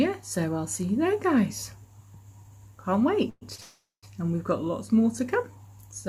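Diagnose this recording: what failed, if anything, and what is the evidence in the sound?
At 3.29 to 3.43 s and again at 3.60 to 4.05 s the sound halts and its last moment hangs on as a fading buzz; the second hold runs about 420 ms and sinks into 130 ms of silence. Nothing is lost afterwards. This is a call audio freeze, likely network packets held up until the jitter buffer emptied.

Between 3.55 and 3.60 s a sound is drawn out about 30 ms too long, with a faint dip, then carries on intact. That is a short stall from a late packet: the jitter buffer briefly ran dry and the receiver stretched the previous audio until the packet arrived.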